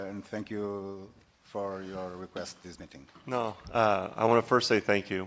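No technical faults are audible.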